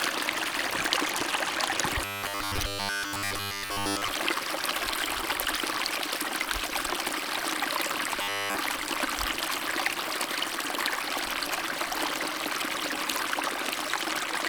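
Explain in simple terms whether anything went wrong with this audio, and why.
Robotic sound from repeated short buffers appears from 2.05 to 4.08 s and again from 8.22 to 8.58 s. The sound turns into a rigid 100 Hz buzz, likely because fresh audio arrived too slowly and a 10 ms slice kept repeating, covering most of the first stretch and all of the second.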